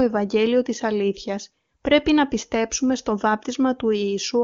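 No technical faults occur at any point in the speech, which is carried by the AMR wideband (HD Voice) codec at 23.85 kbit/s with at most faint coding traces.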